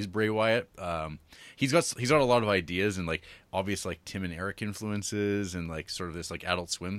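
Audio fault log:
No faults are heard anywhere in this speech clip. Nothing in the audio calls for an entry in the log.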